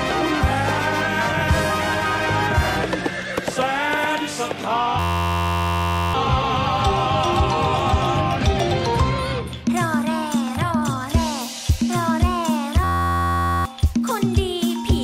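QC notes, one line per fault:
4.99–6.14 s: system hang loop. An 11.6 ms scrap repeats about 99 times, giving a flat 86 Hz buzz that fits a 512-sample buffer; roughly a second of audio goes missing.
12.84–13.65 s: system hang loop again. Same 86 Hz buzz from the same tiny looping buffer while things froze, repeating about 70 times and swallowing around 0.7 s.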